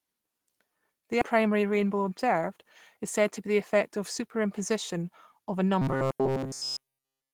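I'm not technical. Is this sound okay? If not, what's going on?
No, the recording has three faults.

Skip ahead: at 1.21 to 1.23 s, about 0.4 s of speech is missing. Playback jumps straight to later audio with no gap or filler, so the two sides of the cut join abruptly and part of what was said is lost.

Jitter buffer speed-up: from 1.33 to 2.97 s, just before "is said to be", the speech runs about 9% fast at normal pitch. The receiver had too much audio waiting and trimmed tiny slices, about 0.15 s in total, so it sounds slightly hurried.

Robotic sound from repeated short buffers: from 5.82 s, right after "of a", to the end at 7.33 s, the speech becomes a steady metallic buzz at 133 Hz. The likely cause is audio arriving too rarely, so the software loops a tiny 7.5 ms slice over and over in place of the real sound.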